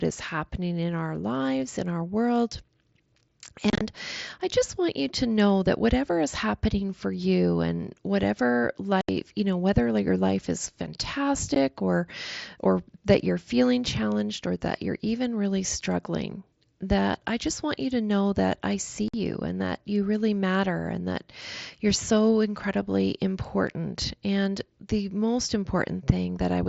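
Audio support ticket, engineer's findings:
Unconcealed Bluetooth headset packet loss at 3.70–3.81 s (chopped, about 75 ms missing across 105 ms, longest gap 30 ms), 9.01–9.09 s between "for you and whatever" and "you know whether your", 11.55 s (15 ms hole) before "or or that you're", and 19.08–19.14 s between "know that I see" and "and that you really". The headset-to-phone radio link is the probable component: packets are dropped and filled with silence, with no smoothing. Hard-edged holes in multiples of about 7.5 ms over mSBC wideband audio point to lost link packets, not longer, smoothed network dropouts.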